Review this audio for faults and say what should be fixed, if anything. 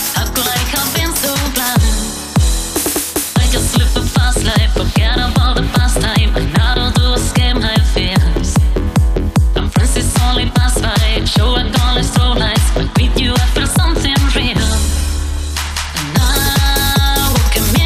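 Nothing in this recording needs fixing; no faults are audible.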